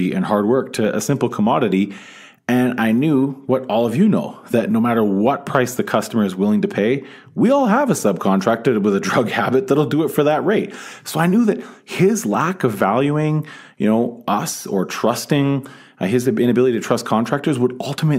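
No technical faults can be heard anywhere in the recording; the speech signal stays intact and continuous throughout.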